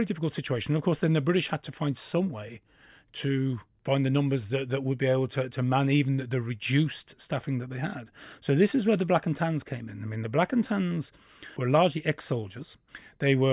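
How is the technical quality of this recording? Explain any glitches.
No technical glitches can be heard in the recording. Nothing in it needs explaining.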